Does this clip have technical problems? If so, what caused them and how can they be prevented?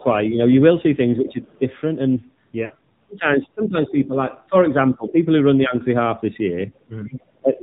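Yes. The AMR narrowband mobile codec runs through the whole clip at about 7.4 kbps, and its damage is plainly audible: nothing above 4 kHz survives, and the pulse-driven vocal tract model gives the voice a synthetic, modelled character. A wideband codec or a higher AMR mode would avoid this.

At 0 to 0.06 s the voice dips by about 10 dB. Across 3.19 to 5.74 s, roughly a second in total gets pulled down by up to about 15 dB. That's likely speech suppressed in double talk, where the echo canceller treated the talker as loudspeaker echo. A headset or better double-talk detection would prevent it.

A second, quieter voice comes through at 1.29 to 1.58 s, about 25 dB below the speech, then in brief scraps at 5.08 to 5.12 s and 7.15 to 7.21 s, about 20 dB below. That's likely the other side's voice leaking through because the echo canceller didn't fully remove it. Using a headset would stop it.

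At 2.66 to 2.71 s there's a short drawn-out patch that fades away. It fits lost AMR speech frames, two of them, about 40 ms. Radio errors broke those frames, so the decoder reused the last good settings with falling gain. Better radio coverage prevents this.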